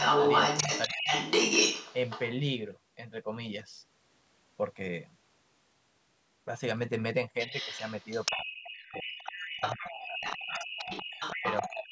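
From 0 to 2.28 s a second voice sits over the speech, louder than the talker. This is the other side's voice leaking through, likely loudspeaker echo the canceller failed to remove. Within it, 0.87 to 1.07 s, the talker dips sharply, speech suppressed in double talk, the likely cause being the canceller attenuating both voices at once. The leak returns more quietly, below the talker, at 7.4 to 8.46 s and 8.63 to 11.7 s. Further suppression follows at 8.67 to 9.14 s, 9.52 to 10.22 s, 11.40 to 11.46 s and 11.69 s to the end, with the deepest drops cutting the speech almost to silence.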